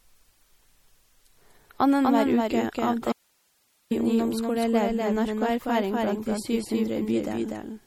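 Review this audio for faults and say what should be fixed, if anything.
A doubled audio track runs throughout: a second full copy sits about 5 dB down and about 200 ms late, likely from a slower parallel capture path. Route the source through a single capture path and mute any duplicate monitor feed.

MP3 compression damage is plainly audible across the clip as watery, swirling texture and smeared attacks, which points to a low bitrate around 48 kbps. Record and deliver at a higher bitrate or in a lossless format.

An audio dropout to a faint residue runs from 3.12 to 3.91 s. The signal vanishes abruptly for about 0.79 s, leaving only hiss about 45 dB below program level, likely a broken input with the downstream chain still live. Secure connections and monitor input levels continuously so breaks are caught during recording.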